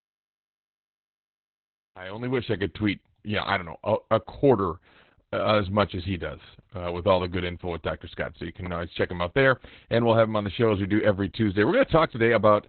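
From the first moment to the end, the speech carries heavy Opus voice compression, and the coding damage is there throughout. Nothing is left above 4.4 kHz, so the sound is narrowband and muffled. The coder is working in its SILK linear-prediction mode and describing the excitation coarsely. That gives a hoarse, slightly robotic edge, which points to a very low bitrate of around 8 kbps.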